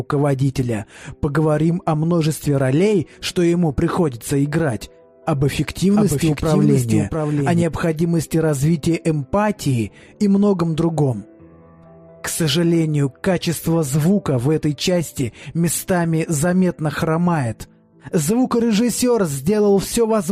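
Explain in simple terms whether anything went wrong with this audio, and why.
Between about 6.0 and 7.6 seconds there is a doubled audio track: a second, quieter copy of the same sound plays roughly 0.7 seconds behind the first. Unlike an echo or room reverberation, the copy doesn't fade away or take on a roomy tone. It is simply the same sound again, switching on and off abruptly. The likely cause is the sound being picked up a second time through a slower path, or an edit that left two misaligned copies.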